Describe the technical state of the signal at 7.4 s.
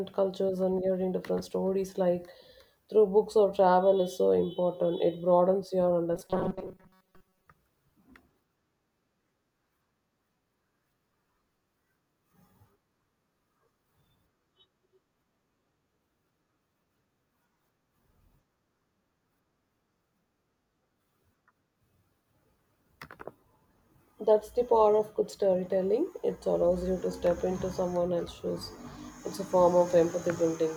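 At 7.4 s you're near the end of the robotic sound from 6.15 to 7.48 s: a rigid 188 Hz buzz, likely from a roughly 5.3 ms buffer replaying over most of the speech.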